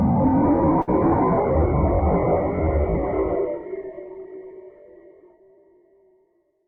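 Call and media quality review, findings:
Burst of packet loss, 0.81 to 0.89 s. Symptom: about 60 ms where the preceding sound is stretched and fades out, then the audio resumes with roughly 60 ms skipped. Probable component: network jitter buffer / decoder concealment. Mechanism: consecutive packets lost or late, receiver extrapolates then attenuates. Spectrogram: smeared, decaying band before a hard discontinuity. Waveform: shrinking envelope, abrupt restart.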